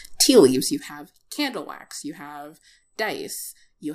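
A speech clip with zipper noise from 0.53 to 1.00 s: the level drops roughly 15 dB in unsmoothed 1 dB steps, about forty per second, each step clicking.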